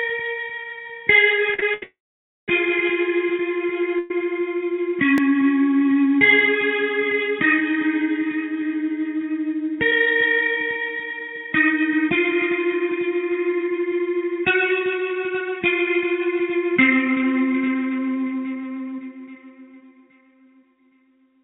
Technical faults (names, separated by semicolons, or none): repeated stalls (stutter); call audio freeze; dropped buffer (overrun); jitter buffer speed-up